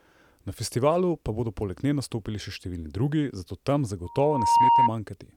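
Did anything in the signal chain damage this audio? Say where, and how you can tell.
Yes. Loudspeaker feedback squeal in the analogue acoustic path, where the microphone hears the loudspeaker it drives, damages the speech from 4.04 s to 4.91 s. A single tone near 936 Hz appears and swells over about half a second until it sits roughly 10 dB above the speech. At that frequency the loop gain exceeded one, so each pass through microphone, amplifier and loudspeaker reinforced the tone. It kept growing until limited or until the loop was broken.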